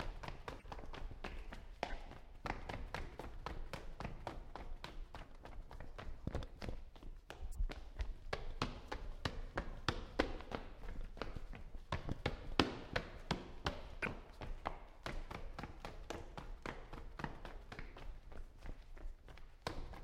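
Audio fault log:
0.59–0.65, 1.90–1.93, 5.25, 7.53–7.60, 12.31–12.33, 14.03–14.05, 17.18 s, corrupt frame decoded: runs of one to a few damaged compressed frames were decoded anyway. This puts energy at wrong frequencies as brief chirps or blips. Most are faint, but the one at 14.03 s is clearly louder. A spectrogram shows short, misplaced smears or streaks, and a waveform shows small spikes.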